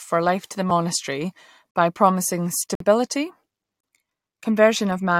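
Gaps between stream segments break the speech at 0.70 s, 1.71 to 1.75 s, 2.75 to 2.80 s and 3.81 to 3.83 s, roughly once per second, which fits 1-second segments. Each segment's time stamp starts slightly after the previous one ends, so the player fills the space with silence. The holes last 3.5, 40, 52 and 29 ms. Each is a hard-edged dropout. No audio is lost, but the speech stalls.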